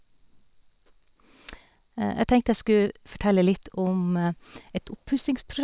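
Nothing in the speech stood out as a technical fault on listening.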